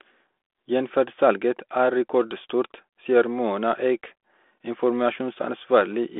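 No technical faults are audible.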